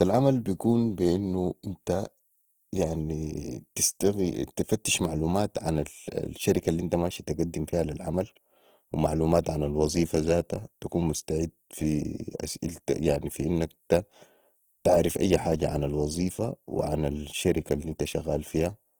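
All the way through, the speech has a grainy, rough texture with a noisy fizz on the voiced parts, which likely comes from Opus compression. It keeps full bandwidth up to about 20.2 kHz but fills starved bands with noise, which fits a low rate near 16 kbps in music mode.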